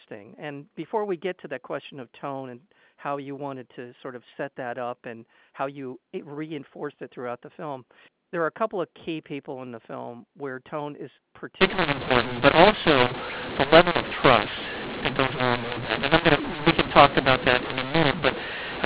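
From 11.61 s to the end, the speech turns harsh and distorted: a mu-law and A-law mix-up, with mu-law coded telephone audio decoded as A-law. Sample levels are scrambled, some inflated and others shrunk, and the quietest samples rise well above silence, so pauses fill with noise.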